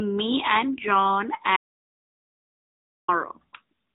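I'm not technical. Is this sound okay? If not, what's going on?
No. The whole recording went through the AMR narrowband mobile codec, so the speech sounds like an old phone call: muffled, with nothing above 3.8 kHz, and plainly buzzy and synthetic rather than merely quiet. Then an audio dropout to silence cuts the speech off at 1.57 s and brings it back mid-flow at 3.08 s. That gap of about 1.5 s is dead silence with no background hum, unlike a pause, likely because the input was briefly lost.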